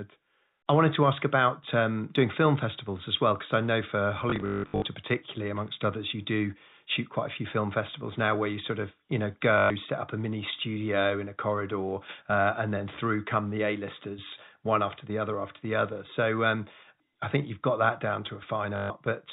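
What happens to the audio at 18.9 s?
At 18.9 s a packet loss with the last packet repeated ends. It starts at 18.76 s, just after "you've got that down", and lasts 140 ms. Audio stopped arriving, so the receiver kept replaying the last chunk it had. The repeats form a buzz near 50 Hz, which fits 20 ms packets. It sounds like a brief robotic stutter.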